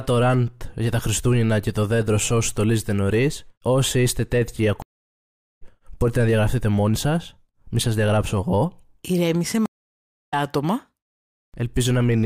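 At 4.82 s the speech drops out for 0.76 s, until 5.62 s. This is a stream reconnect. The connection broke and a new decoder started mid-stream. Speech resumes about half a second further on. At 9.66 s it recurs: 0.64 s of silence, resuming roughly 0.7 s later, at 10.34 s.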